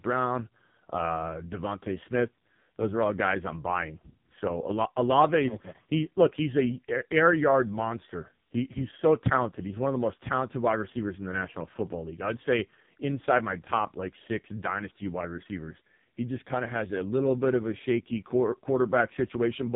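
From start to end, the speech carries heavy AMR narrowband mobile codec damage. Nothing above about 3.8 kHz survives, so it sounds thin and muffled. Each frame is rebuilt from a crude vocal-tract model. The result is buzzy and synthetic, which fits AMR-NB's lowest 4.75 kbps mode.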